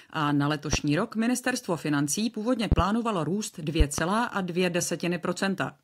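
Loud pops break into the speech three times. A single pop lands at 0.73 to 0.77 s, between "a na" and "rok ministerstvo financí původně". A double pop follows at 2.72 to 2.82 s, just after "rok ministerstvo financí původně", and another pair at 3.80 to 4.01 s. Each stands well above the speech level. The likely cause is a voltage pulse from a switch, plug, static or driver glitch. Unlike a dropout, the speech carries on underneath each thump.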